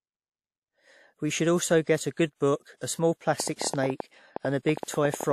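Pre-echo at 2.35 to 2.41 s, 2.77 to 2.81 s and 4.84 to 4.88 s in this speech recording: codec noise sized for a late attack spreads 40 to 54 ms ahead of it, blurring onsets. A train of clicks runs from 3.4 to 5.32 s, about 20 irregular pops near 10.5 per second, peaking about 10 dB above the speech, likely from interference, a faulty connection or a power supply.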